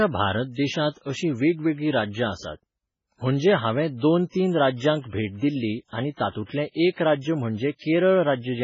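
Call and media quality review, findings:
Watery, swirly speech throughout, with heavy codec damage and nothing above 7.5 kHz. Likely MP3 compression: weak frequency lines dropped and flickering frame to frame, treble cut off, consistent with a bitrate around 16 kbps.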